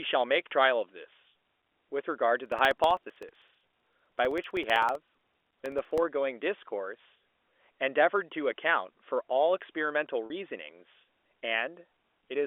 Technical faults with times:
2.46-5.98 periodic USB or driver dropouts
10.26-10.30 packet loss with pitch repetition

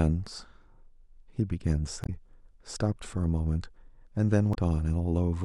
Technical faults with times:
2.03-2.09 damaged data in a compressed stream
4.51-4.57 damaged data in a compressed stream

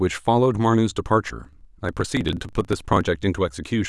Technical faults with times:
1.41-3.04 block size mismatch (truncated)

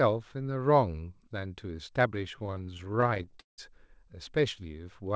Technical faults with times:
2.36-3.60 repeated stalls (stutter)

